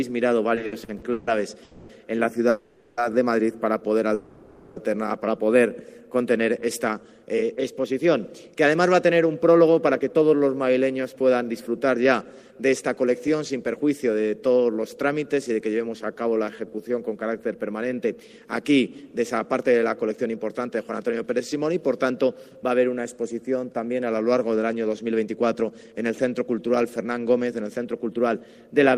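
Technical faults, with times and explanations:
0.55–1.29 s, repeated stalls (stutter): seven short gaps, longest 150 ms, fill 320 ms. The buffer kept running dry, so sound repeats and drags.
1.63–1.91 s, 2.49–2.99 s and 4.14–4.78 s, call audio freeze: the last sound is held as a fading buzz or hiss for 260, 480 and 620 ms. Likely delayed packets emptied the buffer.
6.42–13.76 s, jitter buffer speed-up: sound runs about 10% fast at unchanged pitch. Roughly 0.7 s of short pieces were trimmed to cut excess delay.
16.05–16.88 s, jitter buffer slow-down: sound runs at 85% speed, same pitch, stretched by 136 ms. Repeated pitch periods rebuilt a low buffer, giving a slight drawl.
18.70–28.35 s, jitter buffer speed-up: sound runs about 6% fast at unchanged pitch. Around half a second was removed, so it feels slightly hurried.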